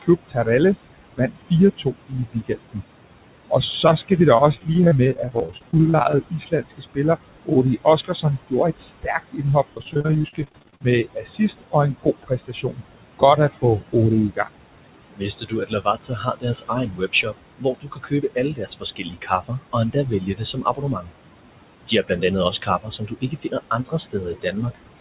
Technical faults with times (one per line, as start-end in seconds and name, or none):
0.00-25.00 noise suppressor artifacts
0.02-2.82 speech cut by the noise suppressor
3.50-14.47 speech cut by the noise suppressor
4.37-6.18 repeated packet loss (robotic sound)
9.73-10.85 repeated packet loss (robotic sound)
15.15-21.11 speech cut by the noise suppressor
21.87-25.00 speech cut by the noise suppressor